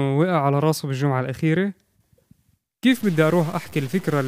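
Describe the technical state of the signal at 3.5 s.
A stuck bit runs from 2.92 s to the end at 4.28 s, so 3.5 s falls inside it. One data bit stays fixed, likely from a faulty line or converter, pushing about half the samples off by a step of about -35 dBFS and adding harsh, buzzy distortion that also fills pauses with noise.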